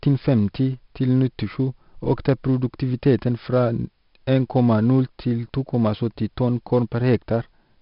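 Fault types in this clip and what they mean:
4-bit ADPCM compression: Every sample is stored as a small coded step from a predicted value, so the error rides along with the speech as a heavy, gritty hiss that swells on loud syllables and roughens sharp onsets where the step size lags. Nothing reaches above 5.3 kHz, which points to a sample rate near 11 kHz and a stream of about 44 kbps. Unlike a perceptual codec's swirly, watery artefacts, the damage here is steady broadband grain.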